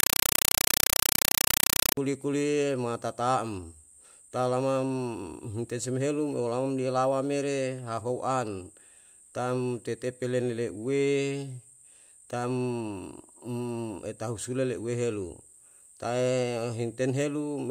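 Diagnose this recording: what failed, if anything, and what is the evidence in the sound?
At the playback stage, a Dolby Digital (AC-3) stream on the digital link was treated as ordinary PCM samples instead of being decoded: a compressed stream played as audio. From 0.0 to 1.97 s the speech is replaced by very loud, harsh chattering static. Each packed frame comes out as a burst of noise about 5.33 ms long followed by silent padding, repeating at 31.25 per second. That rate and spacing fit a 256 kbps AC-3 stream.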